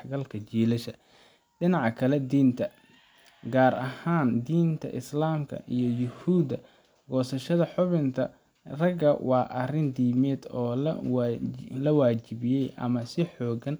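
No technical faults can be heard anywhere in the speech; the signal stays continuous and steady throughout.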